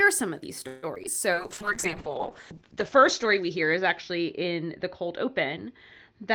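From 0.67 to 1.09 s, repeated packet loss gives a choppy, robotic sound: four gaps, the longest 153 ms, with about 42% of the span patched by repeating earlier sound. A spectrogram shows smeared, copied frames and brief holes.

From 1.34 s to the end, a call bitrate drop from 32 to 7 kbps makes the audio rough and muffled. The spectrogram loses all energy above 8 kHz, down from 20 kHz.

Between 2.09 and 3.01 s, a jitter buffer slow-down stretches the sound by 60 ms, to 94% speed at unchanged pitch. The waveform shows repeated, identical pitch periods.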